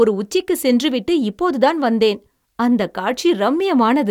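No technical faults are audible.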